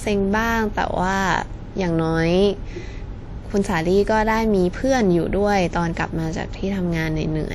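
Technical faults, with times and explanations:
Throughout, WMA compression: the speech sounds ringing and washy, with hiss breathing alongside it. This plainly audible damage likely comes from a low bitrate, around 48 kbps.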